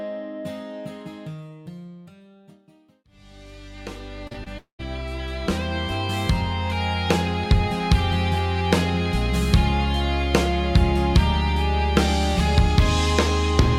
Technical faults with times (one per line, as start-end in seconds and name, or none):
4.27-4.48 short concealed packet loss
4.58-4.81 long network dropout